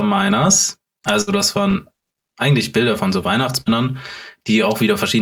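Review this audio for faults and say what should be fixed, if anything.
The speech has a hollow, phasey colour from start to finish, caused by channel delay (comb filtering). One channel arrives roughly 5 ms late, and when the two are summed to mono, the shared content cancels at regularly spaced frequencies. The first notch falls around 100 Hz, with further notches about every 200 Hz above it. On a spectrogram these show as fixed dark horizontal stripes running through the whole clip. Prevent it by aligning the channels before any mono fold-down.

There are two bursts of packet loss. The first runs from 1.21 to 1.30 s, just before "das waren eigentlich". The second runs from 3.61 to 3.69 s, right after "von so". In each, the receiver held and faded the last sound for about 50 to 56 ms, heard as a brief buzz or hiss, and then resumed with about 60 ms of speech skipped. The waveform shows a smooth decaying stretch followed by an abrupt jump. 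The spectrogram shows a smeared, frozen patch followed by a discontinuity. Prevent it with a larger jitter buffer or a more reliable network path with forward error correction.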